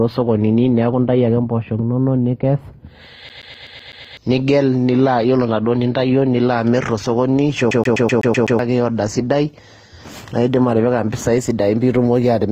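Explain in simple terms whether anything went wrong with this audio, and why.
Two things went wrong in this speech clip.

The first is a CD stuck on one turn. From 3.29 to 4.17 s, and again from 7.71 to 8.59 s, the sound catches and repeats. Each time, a slice of about 126 ms plays seven times in a row, with a tiny gap at each jump. A scratch on a disc does this. It sends the player back to the same spot on every turn. The result is a fast, even stutter.

The second runs through the whole clip. The speech carries a mix of different compression artefacts heard together. Nothing is heard above about 15.7 kHz, so the top sparkle is missing. The likely cause is transcoding between lossy codecs. The audio was squeezed small, then squeezed again in a different format. The pattern fits HE-AAC followed by Opus. Each step leaves its own damage, and the damage adds up.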